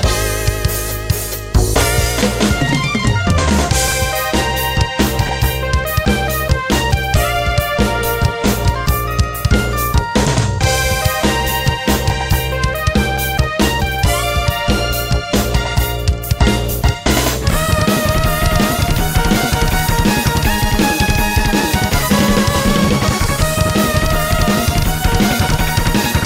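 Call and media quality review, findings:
Chunks out of order at 3.88–3.92 s and 5.27–5.29 s. One 10 ms block plays three slots late in the first event and one slot late in the second, which fits 10 ms packets reordered in the jitter buffer or playout path. The result is a brief jumbled stutter. On the waveform it shows as three hard discontinuities per event, and on the spectrogram as thin vertical broadband lines.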